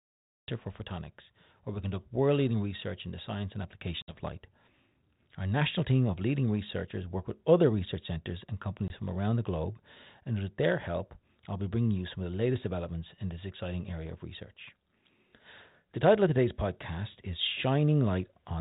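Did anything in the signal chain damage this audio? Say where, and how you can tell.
Yes. A cut-off start at the recording stage: the audio begins at 0.48 s, mid-sound, out of digital silence with no natural attack. Unlike a fade-in, there is no gradual rise.

Packet loss on an ADPCM call, at the network stage: hard-edged silences at 4.02 s after "in the science and" (60 ms, about three packets) and 8.88 s after "other research centres and" (20 ms, one packet). The 32 kbit/s G.726 predictor's resynchronisation leaves the speech slightly distorted afterwards, unlike a clean dropout.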